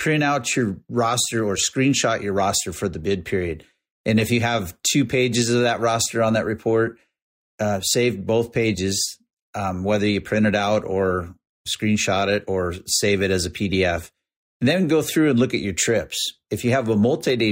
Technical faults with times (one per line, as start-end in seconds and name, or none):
none